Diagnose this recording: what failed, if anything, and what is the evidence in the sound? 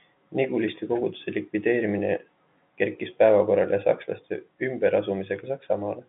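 Nothing in the recording has failed. The speech sits in a telephone band of roughly 150 Hz to 3.6 kHz with nothing above about 3.8 kHz, which fits a G.711 mu-law line at 64 kbps working as designed.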